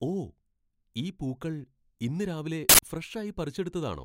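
At 2.69 s an uninitialised buffer plays for about 93 ms, which fits a 4096-sample block. Leftover memory was output as samples before real audio arrived, giving a harsh, loud digital burst. The waveform jumps sharply, and the spectrogram shows a bright broadband block.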